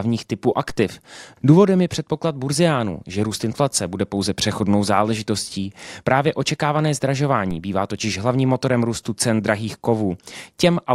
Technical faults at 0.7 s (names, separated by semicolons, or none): DC step